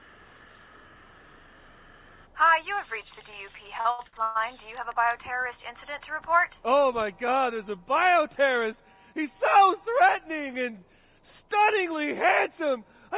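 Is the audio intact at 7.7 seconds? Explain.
Yes, the audio is intact at 7.7 seconds, with nothing there beyond the narrowband character of the call path, which carries nothing above 4 kHz.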